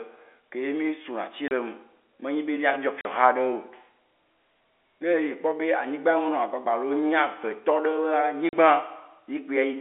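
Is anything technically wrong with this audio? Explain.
Yes, there are three dropouts from packet loss filled with silence, at 1.48–1.51 s (30 ms), 3.01–3.05 s (40 ms) and 8.49–8.53 s (40 ms). Missing packets were replaced by digital silence, leaving hard-edged gaps. The lengths fit 10 ms packets. The G.711 telephone band, roughly 300 Hz to 3.5 kHz, sits around the gaps.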